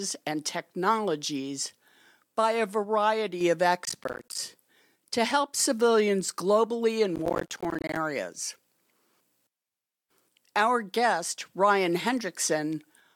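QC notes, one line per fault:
3.85–4.38 s and 7.16–7.97 s, processor overload crackle: bursts of gritty crackle tear through the speech, the second longer and denser. The processor missed many buffer deadlines in a row, so short chunks of roughly 10 ms dropped out to silence, each leaving a hard-edged gap.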